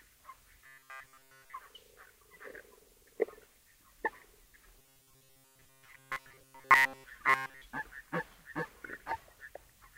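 Audio likely arriving too seldom, with short buffers of about 7.5 ms repeated instead, gives robotic sound from repeated short buffers at 0.66 to 1.54 s, 4.79 to 7.04 s and 7.30 to 7.62 s: a rigid metallic 133 Hz buzz, entirely repeated material in the first and last spans, mostly repeated in the middle.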